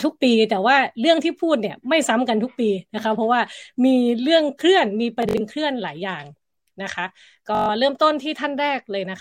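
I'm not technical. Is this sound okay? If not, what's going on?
No, there's Bluetooth stutter in this speech at 5.2 to 5.4 s and 7.55 to 7.69 s: data dropped out, so tiny slices repeat in a quick buzz, then the voice jumps ahead.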